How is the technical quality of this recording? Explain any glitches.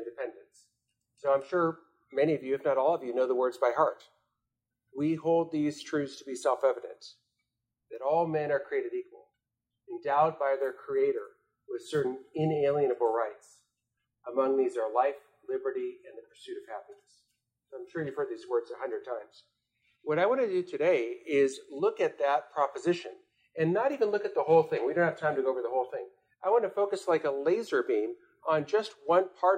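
No glitches can be heard anywhere in the recording; the signal stays steady and intact throughout.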